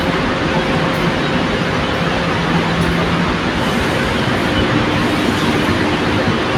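No technical faults can be heard anywhere in the recording; the signal stays continuous and stable throughout.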